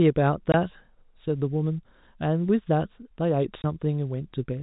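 At 0.52 to 0.54 s the speech drops out completely. A second hole of the same kind follows at 3.62 to 3.64 s. Each gap lasts 20 ms, which fits one lost packet. This is packet loss filled with silence. The receiver had no audio for that slot, so it played nothing. The cuts are abrupt. Around them, the G.711 telephone coding keeps the sound band-limited below 4 kHz.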